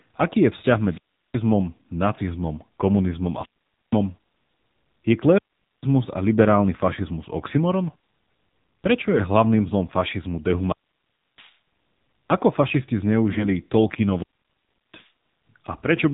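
The speech has passed through an AMR narrowband mobile codec at a low mode. The sound points to roughly 7.4 kbps. The codec samples at 8 kHz and rebuilds the voice from a vocal-tract model driven by a sparse set of pulses, so nothing above 4 kHz survives. At this bit budget the damage is plainly audible throughout: the voice sounds muffled and band-limited, with a buzzy, synthetic edge where the few excitation pulses cannot capture the natural waveform.

Two short bursts of AMR bit errors follow, the first from 9.12 to 9.25 s and the second from 13.30 to 13.46 s. In each, a few percent of the less protected bits in several consecutive frames arrived flipped, while the checksum on the critical bits still passed, so the decoder used the corrupted data. Misplaced excitation pulses and slightly wrong gain and spectral values make the voice turn hoarse, scratchy and gargly for a fraction of a second, while its pitch and loudness stay roughly in place.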